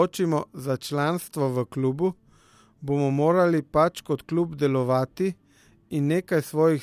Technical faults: none

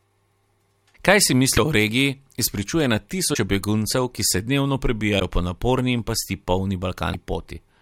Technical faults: broken MP3 bit reservoir

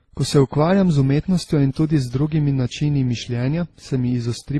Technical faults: transcoding between lossy codecs

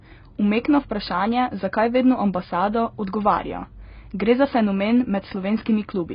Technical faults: AAC compression

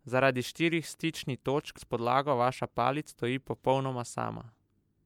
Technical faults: compressed frames skipped

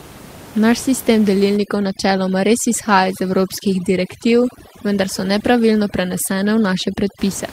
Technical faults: overdone noise removal

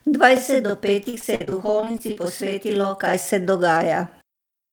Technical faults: channel delay (doubling); repeated packet loss (robotic sound)

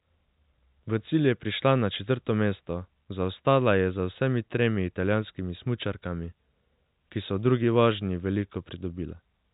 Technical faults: none

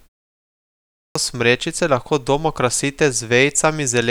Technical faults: clipped start after a pause

